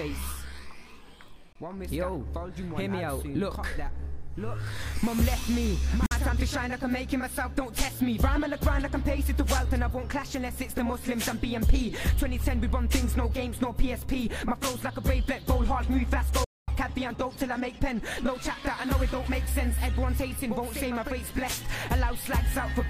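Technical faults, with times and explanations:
1.53–1.56 s, 6.06–6.12 s, 16.44–16.68 s: Bluetooth dropout, likely from late wireless packets. Silences of about 23, 46 and 232 ms, and the sound resumes further on, unlike a stall that pauses and continues.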